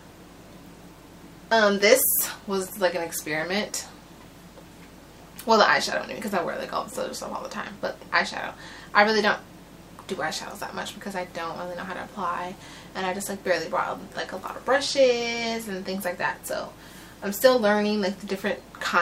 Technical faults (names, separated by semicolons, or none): none